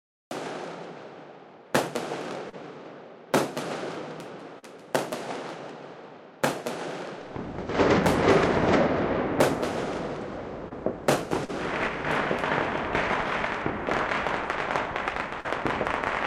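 The audio has a cut-off start: the first 0.31 s is digital silence, and at 0.31 s the sound appears abruptly, already in progress, with no attack or fade-in. The capture began after the sound source was already active, so the opening of that event is missing and the signal steps straight from silence into the sound.

Short concealed packet loss follows at 2.49 s, 4.59 s, 10.69 s, 11.45 s and 15.40 s. Each time, about 40 ms of audio (20 ms at 10.69 s) failed to reach the decoder in time. The receiver filled each gap by extending the preceding sound for roughly 25 to 40 ms and then crossfaded back into the real signal. Each dropout is heard as a brief smear or wobble lasting about a twentieth of a second.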